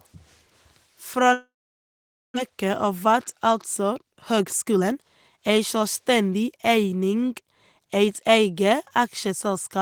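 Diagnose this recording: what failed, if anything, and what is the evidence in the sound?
At the network stage, a long network dropout is the likely cause of the gap from 1.33 to 2.38 s. The last sound is stretched into a fading buzz, then about 0.85 s of silence, and roughly 0.6 s of speech never returns. A local glitch would not lose content this way.

At the buffer stage, jitter buffer speed-up follows from 2.49 to 4.96 s (110% speed) and from 5.37 to 7.07 s (108%). Short pitch-period slices are cut, trimming around a third and a sixth of a second. The speech sounds hurried while the pitch holds, which a sample-rate mismatch would not do.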